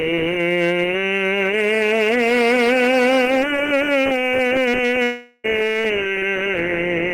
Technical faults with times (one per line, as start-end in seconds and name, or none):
0.00-7.14 hard clipping
5.03-5.46 long network dropout